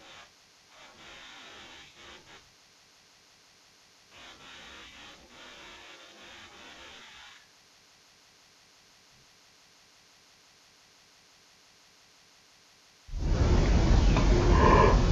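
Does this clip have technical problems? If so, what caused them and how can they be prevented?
Yes. Stereo read as mono affects the whole clip. Interleaved left and right samples play as one channel, so speech runs at half speed, an octave low. Prevent it by declaring the correct channel count when opening or converting the file.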